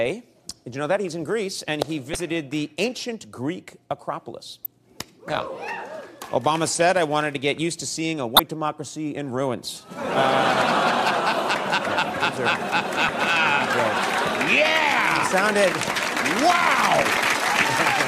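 Short glitches at 2.12–2.15, 4.63–4.66, 8.36–8.40, 13.06–13.10 and 17.14–17.17 s, each about 35 ms, come from damaged data in a compressed stream: corrupted bytes make the decoder misread frames and lose sync until it finds the next valid header.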